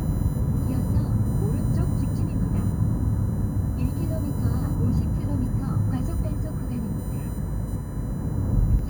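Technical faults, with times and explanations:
Throughout, USB whine: a fixed-pitch whine built on a 1 kHz tone, loudest in its harmonic at 16 kHz and roughly 25 dB below the sound. The USB bus's 1 ms frame timing is leaking into the audio through the power or ground.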